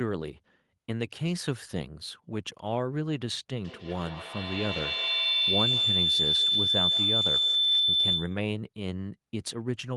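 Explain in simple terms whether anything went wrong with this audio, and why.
Something did go wrong. From 3.64 s to 8.56 s a feedback howl takes over: a piercing whistle near 4 kHz that swells until it is louder than the speech, with the sound looping back roughly every 150 milliseconds. Two devices on the same call were hearing each other, so each pass through microphone and loudspeaker made the sound louder. Ordinary echo repeats and fades away; this one grows and narrows into a single tone.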